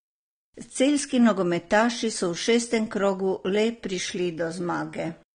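From start to end the speech sounds dull and smeared, with a fizzy, warbling edge on sibilants. A spectrogram shows a hard ceiling with nothing above 9.7 kHz. This is likely AAC compression, quantised coarsely enough to suggest about 32 kbps.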